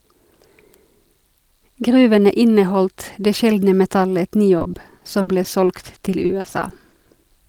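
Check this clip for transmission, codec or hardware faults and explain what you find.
One transmission fault is present: repeated packet loss (robotic sound) from 4.58 to 7.30 s. Packets drop out again and again. Each hole, up to 60 ms, is patched by extending the previous sound. About 450 ms is concealed this way. The speech turns choppy and robotic.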